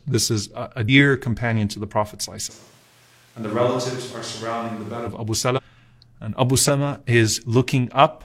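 Compressed frames skipped at 0.84 s, between "this is a a" and "companion to the", then at 5.53 s and 6.64 s in this speech recording: whole frames never reach the output, so the sound jumps forward by roughly 150, 300 and 100 ms. The frames are about 46 ms long. A switch to a distant microphone runs from 2.52 to 5.06 s, where the sound abruptly turns hollow and roomy, thinner in the bass and about 10 dB quieter, with room noise only around 30 dB below the speech, likely because the close microphone dropped out and a farther one took over.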